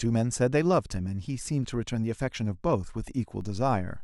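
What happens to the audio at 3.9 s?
At 3.9 s the speech sits on a DC step. From 3.41 s to the end, the zero line jumps by about -37 dBFS and holds, giving a low thump at onset.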